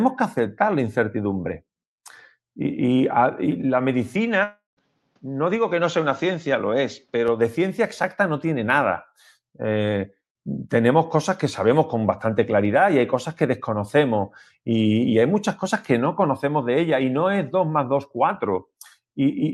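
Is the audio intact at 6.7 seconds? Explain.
No. From 4.15 to 7.28 s, likely an input switched to a poorer device: the band stops near 7.3 kHz, sounding duller, with faint new noise, until "de ciencia exacta no".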